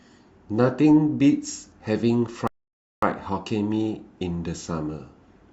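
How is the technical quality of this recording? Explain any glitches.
The quality is let down by one clear glitch, a rebuffering stall from 2.47 s to 3.03 s. The player used up all the downloaded audio before the next portion arrived, so playback had to halt and wait. In the speech this sounds like a sudden drop into silence lasting about 0.55 s, after which the audio picks up exactly where it stopped. No speech is lost, but the pause adds time to the clip.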